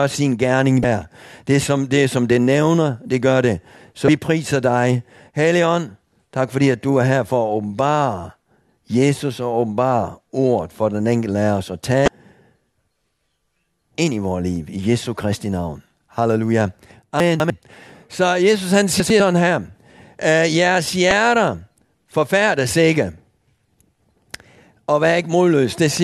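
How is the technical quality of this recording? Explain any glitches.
The technical quality takes a hit from two kinds of glitch scattered through the speech.

Damaged data in a compressed stream shows up at 0.81–0.85, 4.05–4.09, 12.05–12.08 and 21.11 s. Corrupt bytes make the decoder misread frames and hunt for the next header, so each one pops out as a short chirp or blip.

Chunks out of order hit at 17.2–17.5 and 19.0–19.2 s. A 100 ms block lands late, two slots behind in the first case and one in the second, so the audio jumbles briefly across three hard joins.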